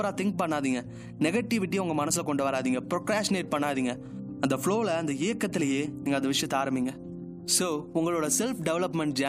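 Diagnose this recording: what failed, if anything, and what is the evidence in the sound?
Nothing failed, and there is no evidence in the sound of any fault at any stage.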